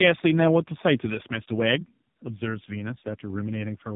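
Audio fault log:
throughout, tandem speech coding: the speech went through two AMR-NB stages, the second re-encoding the first's already degraded output, which fits a low-rate pass followed by a higher-rate one. It sounds rough, muffled and warbly. A spectrogram shows nothing above 3.8 kHz and smeared, blurred harmonics.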